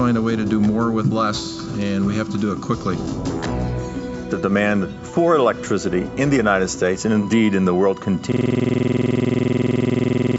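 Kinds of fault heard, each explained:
System hang loop: From 8.32 s to the end, one 46.44 ms piece of audio repeats exactly at 21.5 Hz, which fits a 2048-sample ring buffer cycling while the system is frozen. At that rate it sounds like a coarse, rattling buzz, not a clear stutter. Unlike an underrun dropout, which leaves gaps and then carries on with new material, every cycle here is identical, with no silence and no progress, and it never recovers.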